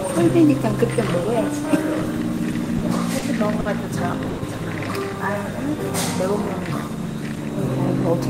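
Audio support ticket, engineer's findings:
Switching supply whistle, whole clip. High tone wandering between 3.5 and 4.0 kHz, around 4 kHz, roughly 30 dB under the program. Probable component: a switching power supply in the chain. It is running in an audible burst mode or beating against another supply, so the switching frequency lands inside the audible band.

Repeated stalls (stutter), 2.37 to 2.83 s. Four short holds, about 60 ms filled in total. Longest hold is 30 ms. About 13% of the span is concealed. Nothing is lost, but the sound drags and stutters. Probable component: the network path feeding the jitter buffer. Packets kept arriving late, the buffer kept running dry, and the receiver repeated the last sound each time.

Short stall from a late packet, three events. At 3.19 s the sound is held for 30 ms. At 3.60 s the hold is 50 ms. At 4.29 s it is 90 ms. Each hold matches a jump in delay of the same size. 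No content is missing, and playback resumes where it stopped. Probable component: the jitter buffer running empty. The receiver stretched the last sound until the late packet arrived.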